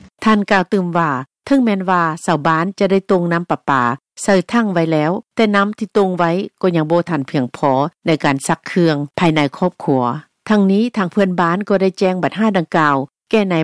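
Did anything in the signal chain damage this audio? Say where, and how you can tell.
No, nothing in the audio stood out as damaged on listening.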